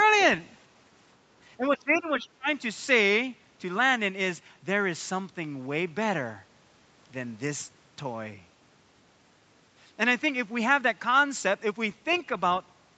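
From 1.58 to 2.48 s the speech dips and breaks up, falling by around 25 dB at its deepest, with roughly 0.7 s of that stretch pulled down in pieces. This is speech suppressed in double talk, likely caused by both sides talking at once. The echo canceller could not tell the near talker apart from the loudspeaker echo, so it attenuated everything it heard rather than only the echo.

Inside that same dip, from 1.77 to 1.99 s, a faint second voice can be heard, roughly 30 dB below the main speech. A shorter scrap of it returns from 12.12 to 12.20 s, quieter still at roughly 35 dB down. This is the other side's voice leaking through, likely because the far end's audio played from the loudspeaker reached the microphone and the canceller left part of it in place. Both fragments sit within the call band, which ends at 8 kHz.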